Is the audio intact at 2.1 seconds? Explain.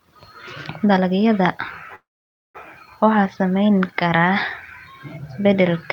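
No. A call audio freeze runs from 1.95 to 2.57 s: packets were likely held up in transit and the jitter buffer ran dry. The last sound trails off into 0.52 s of silence, then resumes at "waxaa saameyn" with nothing lost, 0.59 s late.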